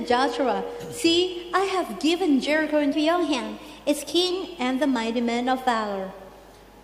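A wrong sample rate from 2.93 to 4.31 s: the samples are played back faster than they were captured, with no conversion, which fits 44.1 kHz material clocked out at 48 kHz. The audio runs about 1.09 times faster and sits roughly 1.5 semitones sharp.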